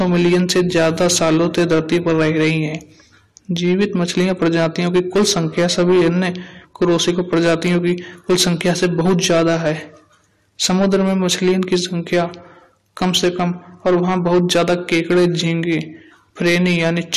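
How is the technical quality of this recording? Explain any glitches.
The recording is marred by hard clipping that runs through the whole speech clip. The signal reaches the converter or gain stage roughly 9 dB hotter than it can pass, so every peak above the ceiling is sliced flat, affecting around one sample in twenty. Those squared-off tops generate strong high-order harmonics well above the natural spectrum of the voice. The result is a gritty, buzzing distortion riding on louder syllables rather than an occasional crackle.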